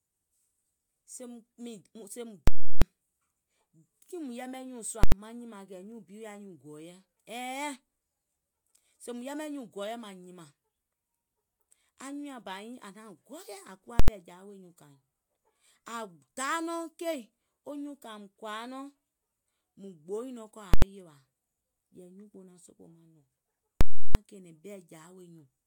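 At 2.48, 5.04, 14.0, 20.74 and 23.81 s, invalid numbers at full scale replace the speech: a calculation produced infinite or undefined values, pinned to maximum amplitude. The 0.34 s blocks give a loud pop at each edge with silence between; the 85 ms blocks are single bangs.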